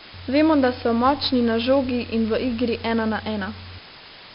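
Speech is buried under a constant, even hiss only about 15 dB below it throughout, with no added distortion. This is low bit depth with dither, and the noise floor points to roughly 6 bits. On top of that, the speech sounds gritty and dull, with heavy damage and nothing above 5.3 kHz. This is 4-bit ADPCM compression at a rate that fits about 44 kbps: coarse adaptive steps leave level-following noise, and the low sample rate removes the top end.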